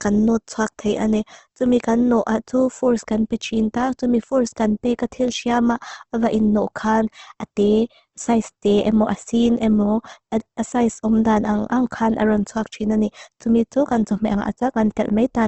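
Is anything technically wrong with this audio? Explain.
Yes. Throughout the speech, the sound is grainy and rough, with a noisy texture, and nothing reaches above 8.2 kHz. The likely cause is Opus compression in its CELT mode: starved of bits, it fills bands with folded or noise content, consistent with a rate around 16 kbps.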